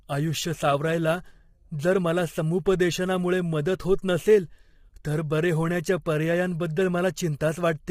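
The clip is speech, and the whole of it is heavily degraded by low-delay AAC compression. The voice sounds rough and grainy. Noise fills the gaps between the pitch harmonics, and the top band sounds thin and synthetic. The likely cause is a low-delay codec such as AAC-ELD. Its short frames resolve harmonics poorly and spend bits fast. The damage fits a low bitrate of around 24 kbps.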